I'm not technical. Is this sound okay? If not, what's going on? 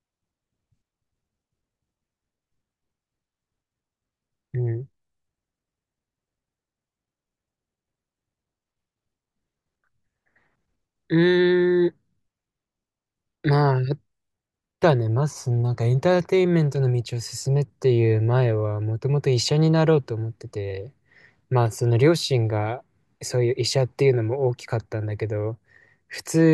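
Yes, no faults can be heard.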